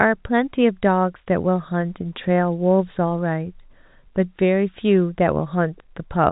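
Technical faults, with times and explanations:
No technical faults occur anywhere in the speech, which comes through the G.711 telephone path with nothing above about 3.8 kHz.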